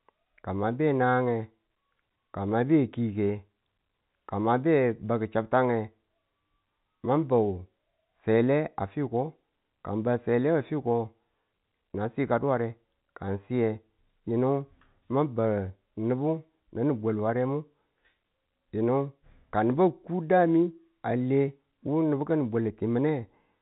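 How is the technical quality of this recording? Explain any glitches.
No glitches or technical faults are audible here.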